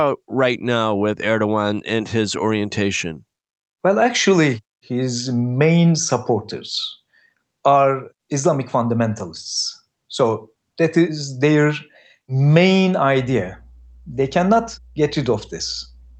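Speech, passed through a call codec whose top end stops at about 8 kHz, picks up mains hum from 13.15 s until the clip ends at 16.19 s: a steady 60 Hz tone with low harmonics, around 25 dB below the speech, consistent with a ground loop or a nearby transformer coupling the power line into the signal chain.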